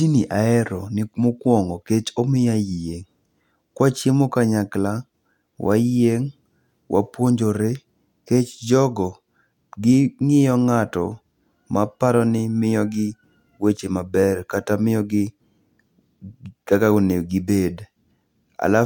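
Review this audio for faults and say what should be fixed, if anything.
Nothing needs fixing; no faults can be heard here.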